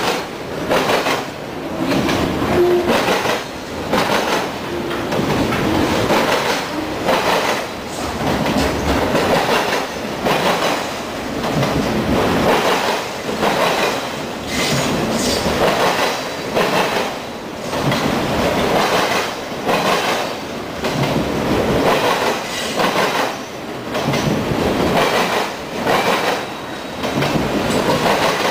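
The audio skips briefly at 6.24, 10.24, 14.23 and 18.22 s, every 4 s. This is likely audio missing between chunks, a few milliseconds lost at each join.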